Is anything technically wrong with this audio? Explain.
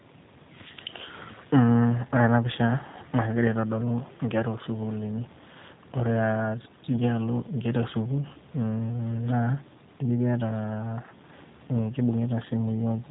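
Yes. Throughout the speech there is G.729 codec damage, plainly audible. Each 10 ms frame is rebuilt from a vocal tract filter, a pitch predictor and a few pulses, which fits an 8 kbit/s stream. The result sounds rough and faintly synthetic, with nothing above 4 kHz. Simple band-limiting would sound dull but clean, not rough like this.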